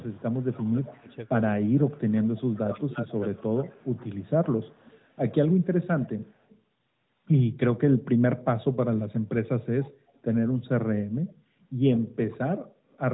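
From 0.0 to 5.85 s, a faint copy trails the speech by 106 ms, about 25 dB down. This echo leak likely comes from a far-end loudspeaker the canceller failed to fully cancel. From 0.53 to 1.97 s and 2.64 to 3.85 s, the speech dips by up to about 20 dB. That is speech suppressed in double talk, as the canceller likely ducks both sides. Briefer echo returns at 6.49 to 6.59, 9.8 to 10.2, 11.28 to 11.98 and 12.9 to 12.98 s, about 25 to 40 dB down.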